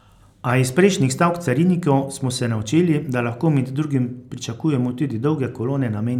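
The speech signal holds steady throughout, with no dropouts, distortion, glitches or level jumps anywhere in the recording.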